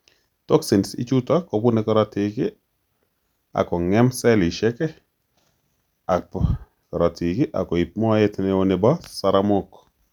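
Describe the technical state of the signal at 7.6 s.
At 7.6 s the speech signal is intact, with no audible technical fault at that moment.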